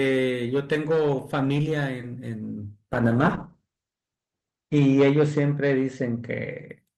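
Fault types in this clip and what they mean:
call bitrate drop: From 2.94 s to 6.75 s the encoder gets starved of bits, so the speech turns coarse and watery and loses its top end above 8 kHz. It sounds like roughly 32 falling to 9 kbps, bottoming out for about 1.9 s.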